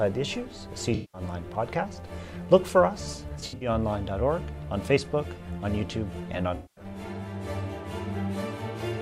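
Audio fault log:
0.94–1.21 s, AAC frame loss with concealment: about 190 ms is replaced by a smeared, noisy extension of the preceding spectrum, consistent with roughly nine lost frames. The gap is filled rather than dropping to hard silence.
3.40–3.69 s, AAC frame loss with concealment: brief losses scattered over about 210 ms, the longest run about 70 ms, give a flickering, phasey texture rather than a single clean gap.
6.55–6.84 s, AAC frame loss with concealment: about 210 ms of filled-in spectrum sounds washy and loses detail. This differs from a click or glitch because the patch lasts for a stretch before the sound resumes.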